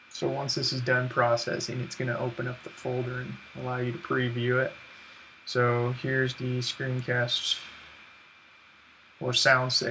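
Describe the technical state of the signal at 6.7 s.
The audio at 6.7 s is intact, with no audible technical fault at that point.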